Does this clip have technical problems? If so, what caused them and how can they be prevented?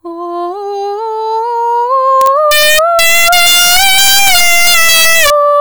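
Yes. Integer overflow runs throughout this music: peaks pushed about 6 dB too hot wrap to the opposite sign, giving violent cracks far sharper than clipping's flattened buzz. Prevent it by using saturating arithmetic or headroom before the integer conversion.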